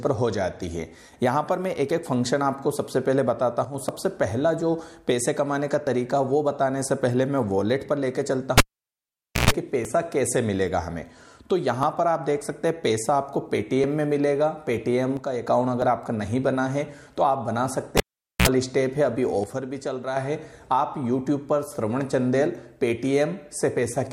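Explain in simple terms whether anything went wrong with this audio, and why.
Three kinds of fault can be heard.

At 3.65 to 3.74 s, 15.17 to 15.47 s and 19.44 to 20.17 s the sound suddenly drops in level and then comes back, most likely because one channel drops out. Unlike a pulled cable, there is no pop, hum or silence, just a quieter stretch.

At 3.89 s and 9.85 s there is a tiny skip where a sliver of sound goes missing. This comes from an overlap between stream segments, which fits a stream cut into 2-second pieces. It is too brief to leave a silence.

From 8.58 to 9.51 s and from 17.97 to 18.48 s, the cable was pulled and plugged in. Each time there is a pop, then near silence lasting about 0.88 s and then about 0.45 s, then a short 60 Hz mains buzz before a second pop as the sound returns.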